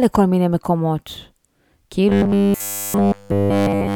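From 2.09 s to the end at 3.96 s, the speech takes on robotic sound from repeated short buffers: a rigid, metallic buzz at 100 Hz that still loosely tracks the words. The likely cause is audio arriving too seldom, so a chunk of about 10 ms is replayed over and over in place of nearly all the real signal. The fixed 100 Hz pitch, which stays put regardless of the talker's intonation, separates it from codec warbling.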